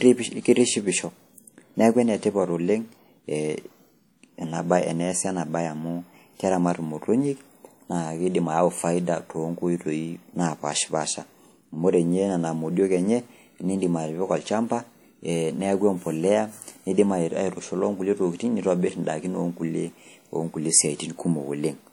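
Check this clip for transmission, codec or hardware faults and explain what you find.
One codec fault runs through the whole recording: WMA compression, most likely the cause of the damage, and plainly audible from start to finish. A block-based transform encoder working at a rate that fits roughly 48 kbps has too few bits for this speech, so its quantisation noise smears across tens of milliseconds around each sound and weak spectral detail is dropped. The result is a ringing, washy quality with a hiss that swells and fades with the speech, while content still reaches up to 20.1 kHz.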